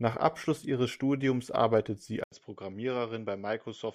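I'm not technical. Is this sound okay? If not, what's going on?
No. At 2.24 seconds, right after "arbeitet sie", there is a short gap of about 80 milliseconds. Then the speech changes character until the end. It sounds duller and a little quieter, because nothing above about 7.6 kHz comes through, and a faint new background hiss appears. This is an input switched to a poorer device. The recording system likely changed to a different, lower-quality microphone or a headset's call mode partway through.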